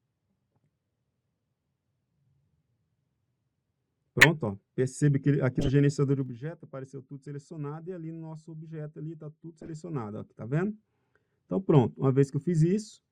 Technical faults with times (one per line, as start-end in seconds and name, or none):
4.19-4.27 corrupt frame decoded
5.59-5.70 corrupt frame decoded
6.08-6.48 zipper noise
9.48-10.92 zipper noise
9.62-9.69 corrupt frame decoded